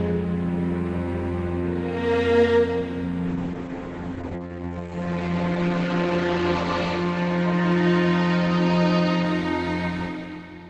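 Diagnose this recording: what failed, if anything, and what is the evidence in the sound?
A call bitrate drop in the codec stage: the bandwidth estimate fell and the encoder was starved of bits. From 3.29 s to 9.31 s the top end above 8 kHz vanishes and the sound turns coarse and watery, which fits a fall from 32 to 10 kbps.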